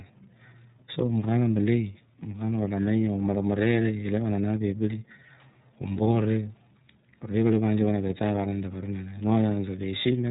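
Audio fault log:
throughout, iLBC codec: Nothing above about 3.8 kHz survives, so the speech sounds narrowband and dull. Each 30 ms frame's excitation is coded on its own, leaving a plainly audible rough, synthetic edge. The sound fits a rate near 13 kbps.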